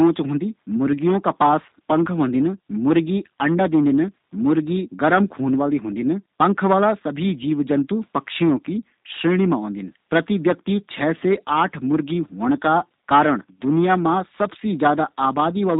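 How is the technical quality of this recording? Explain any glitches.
The quality is limited by heavy low-bitrate compression. Throughout, G.729 codec damage is plainly audible. The speech is rebuilt from a coarse filter and pulse model, which fits an 8 kbit/s stream. Nothing reaches above 4 kHz, so it sounds muffled, rough and slightly synthetic.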